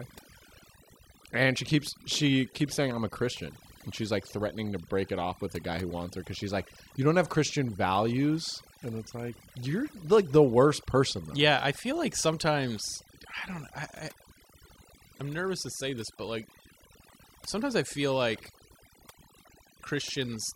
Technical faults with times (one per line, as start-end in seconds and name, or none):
0.00-20.56 overdone noise removal